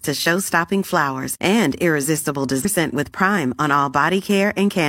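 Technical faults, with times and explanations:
2.60–2.65 s, stream segment skipped: right after "flowers and irresistible" the speech jumps ahead abruptly, with a short blip at the join, so a piece of the talk just isn't there. The likely cause is a segmented stream where one chunk failed to load and the player carried on with the next one. That's why you hear a clean cut to later material rather than a dropout or a stall.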